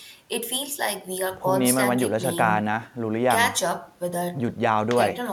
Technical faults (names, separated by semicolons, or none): none